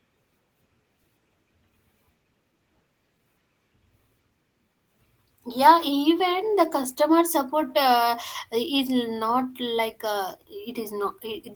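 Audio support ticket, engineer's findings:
No faults found.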